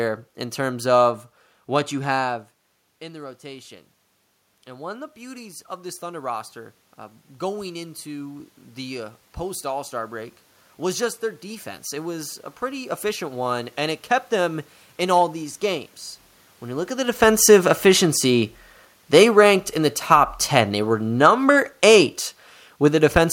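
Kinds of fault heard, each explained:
Automatic gain rising: The gain control heard the input drop by about 15 dB when the talker moved back at roughly 2 s. It answered by raising its gain slowly. From 2.99 s to 13.46 s the level climbs by about 13 dB. The voice and the room noise swell together over those ten seconds, so the background noise grows along with the speech rather than staying steady beneath it.
Automatic gain falling: Around 16.5 s the talker moves, and the gain control finds the input too loud or its background noise too strong. The gain control then pulls its gain down gradually. From 17.2 s to 23.23 s the sound starts loud and sinks by about 6 dB. The room noise sinks with it. This is a slow fade driven by the gain control, not a change in how the talker speaks.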